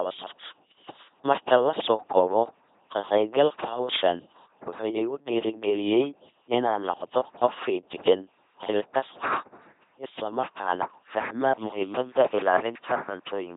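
From start to finish the speech passes through an LPC-10 vocoder, and the damage is heavy. Each moment is rebuilt from a simple filter of about ten poles. That filter is driven either by a buzzing pulse train or by noise, never a mix. The result is a buzzing, mechanical robot voice, with buzz or hiss where the voiced/unvoiced choice goes wrong. Nothing remains above 3.8 kHz. The sound fits a 2.4 kbit/s rate.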